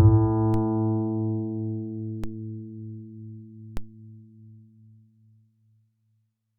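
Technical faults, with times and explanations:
0.54, 2.24 and 3.77 s, DC step: a low thump each time as the zero line jumps by about -20 dBFS, then drifts back through a 5 Hz high-pass.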